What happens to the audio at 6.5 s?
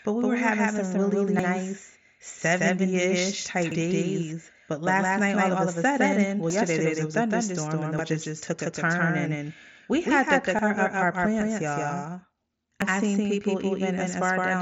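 At 6.50 s there is a sudden jump forward in the speech. This is a dropped buffer (overrun), likely caused by the program failing to collect incoming samples before the hardware overwrote them. Roughly a fifth of a second of audio is lost and the two sides are butted together. Unlike a dropout, there is no gap of silence. The sound simply skips ahead.

Running through this moment, as through the whole clip, is a doubled audio track. A second copy of the speech trails the first by about 150 ms at about the same level, likely because a slower capture path is feeding the same signal in a second time. What separates it from room echo or reverb is that the copy is full-band, carries no decay or room colouring, and repeats only once instead of trailing off.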